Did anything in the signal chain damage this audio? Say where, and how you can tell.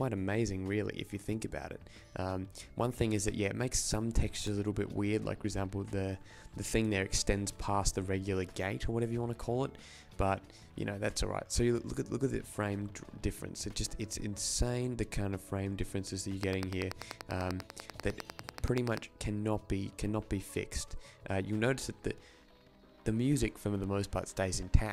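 Yes. At 4.47 s the driver or buffer stage misses a deadline and replays its last block once. The repeated piece is about 1.33 ms long, which fits a 64-sample buffer, so it lands as a single hard-edged click rather than an audible stutter. Nothing is skipped, which separates it from a dropout.

From 16.43 to 18.98 s a train of clicks ticks over the sound at a regular 10.2 per second, around thirty pulses of matching shape, peaking well above the signal. It is likely interference entering the analogue wiring or interface. The steady spacing and identical repeated shape distinguish it from a one-off buffer glitch.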